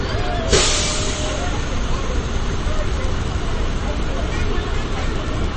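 Throughout the audio there is plainly audible damage that sounds like MP3 compression at a low bitrate, likely around 32 kbps. The top end is missing above 8.3 kHz, and the remaining sound has a watery, swirling quality. On a spectrogram this shows as a flat ceiling at 8.3 kHz, with weaker components flickering on and off between frames.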